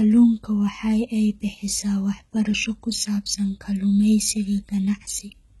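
Throughout, the speech carries heavy HE-AAC compression, likely at a very low bitrate. Treble above 11.8 kHz is gone, and rebuilt highs make s sounds gritty and metallic.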